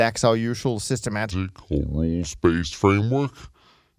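From 1.31 s to the end, the speech turns low and slow, a wrong sample rate fault: playback runs at about 0.73 times speed and drops about 5.5 semitones, which fits 44.1 kHz audio played at 32 kHz. Pitch and tempo fall together, unlike a pitch shift or time stretch.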